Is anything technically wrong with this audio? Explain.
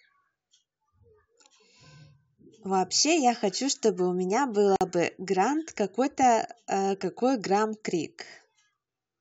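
Yes, there is one fault. At 4.76 s the speech drops out for 49 ms, resuming at 4.81 s. This is a gap at a join of encoded pieces. Separately encoded segments kept their encoder start delay and final-frame padding as silence. The edges are smeared by the codec, and the speech continues where it stopped.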